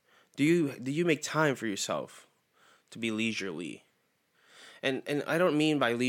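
Two devices in the chain likely run on separate clocks that disagree by something like 100 ppm, so the buffer between them drifts until a few samples are dropped or repeated. These clock drift buffer slips recur every 1.52 s from 0.47 s to 5.05 s, heard as about four regular clicks over the speech.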